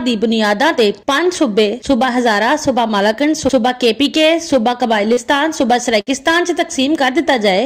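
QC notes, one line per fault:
5.13–5.19 s, short concealed packet loss: About 40 ms of audio never arrived at the decoder in time, so the receiver filled roughly 33 ms of the hole by extending the sound just before it, then crossfaded back into the real signal. The patch is heard as a brief smear or wobble where the continued sound fails to match what should have followed.
6.01–6.09 s, burst of packet loss: About 60 ms of consecutive audio was lost or arrived too late to play, more than the decoder could cover cleanly. It extended the last sound for about 59 ms and faded it as the gap went on, which produces a held, thinning tail instead of the real signal. Playback then resumes further along, so the material between the two edges is missing.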